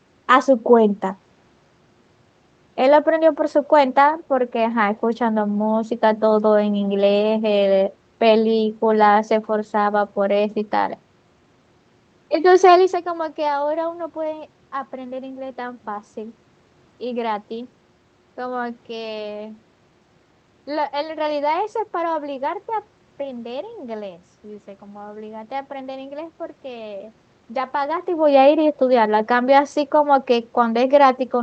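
Nothing is technically wrong with this speech recording.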